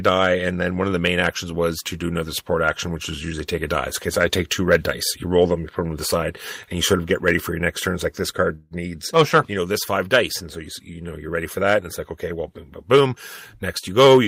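A call audio freeze runs from 8.55 to 8.73 s, just before "needs oh sure you". The stall lasts about 154 ms, likely from held-up packets draining the jitter buffer. The last sound is stretched into a fading buzz or hiss rather than silence, then speech resumes intact and slightly later.

A jitter buffer speed-up begins at 12.82 s, right after "okay well boom boom", and lasts to the end. Repeated removal of tiny pitch-period slices trims roughly 150 ms of backlog, so speech runs about 9% faster at unchanged pitch and sounds hurried.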